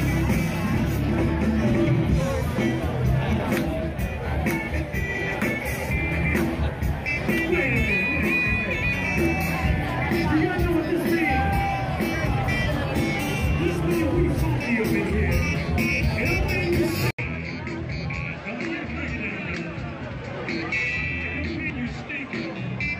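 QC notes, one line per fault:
17.11–22.99 s, input switched to a poorer device: an 80 ms dropout, then duller sound about 5 dB quieter with a faint new hiss, likely a narrower-band microphone taking over. Spectrogram: hard ceiling at 8 kHz. Waveform: flat gap, then smaller envelope.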